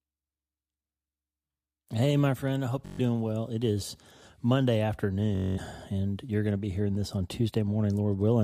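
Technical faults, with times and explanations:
2.86–3.00 s, Bluetooth stutter: right after "my friend I hope" the speech catches on one tiny slice and buzzes it over and over. Packets went missing and the receiver kept replaying its last buffer until new data arrived. When it recovers, about 128 ms has gone by, so it picks up as if it had kept playing.
5.35–5.58 s, Bluetooth stutter: a longer machine-gun burst just before "and you're going to", from the same packet loss, with about 213 ms skipped this time.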